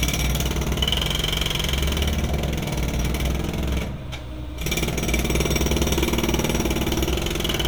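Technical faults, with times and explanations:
0.84 s and 5.90 s, repeated buffer: a tiny click as about 1.33 ms of sound plays twice with a hard join, which fits the last 64-sample buffer being replayed when new audio arrived late.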